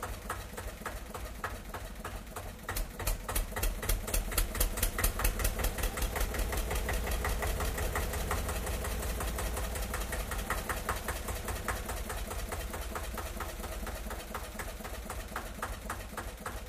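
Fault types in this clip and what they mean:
No fault types are present in this clip.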